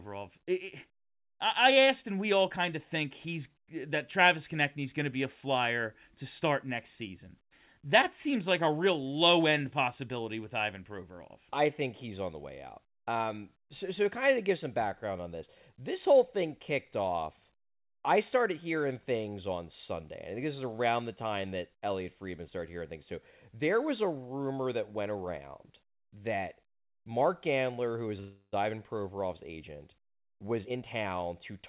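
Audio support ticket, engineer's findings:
Call audio freeze, 28.20 to 28.54 s. Speech halts and the last sound is stretched into a fading buzz lasting about 0.3 s, ending in roughly 40 ms of silence. Speech then resumes where it left off, with nothing lost, so the stream now runs about 324 ms later. Likely cause: delayed packets draining the jitter buffer, with the receiver padding the gap from the last frame. Spectrogram: a smeared, repeating band of stationary partials that fades out, then a short blank column before normal speech returns. Waveform: decaying periodic texture, then a flat line.

Jitter buffer speed-up, 30.25 to 31.61 s. Speech plays about 20% fast at unchanged pitch and sounds rushed. The jitter buffer was holding excess audio, likely from late packets arriving together, and the receiver trimmed it back by cutting single or few pitch periods many times in a row, around 0.3 s in total. 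Spectrogram: harmonic spacing stays the same while syllables and formant transitions are compressed in time. Waveform: shorter syllable envelopes and tighter gaps. Across all sections the spectrum ends at 4 kHz, consistent with a narrowband call codec.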